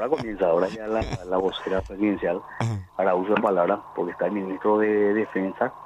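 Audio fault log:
No technical faults can be heard anywhere in the signal.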